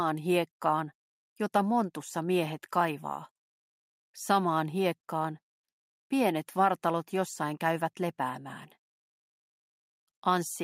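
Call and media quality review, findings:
No technical faults found in the signal path; level, timing and continuity hold steady throughout the recording.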